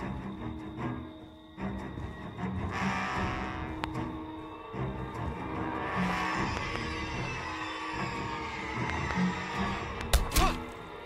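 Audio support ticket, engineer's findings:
Loud pops at 3.84–3.86 s, 6.57–6.78 s (double), 8.90–9.13 s (double) and 10.01–10.03 s. Sharp transients peak roughly 20–25 dB above the signal, which carries on underneath. Likely a voltage pulse from a connector, switch, static or driver glitch.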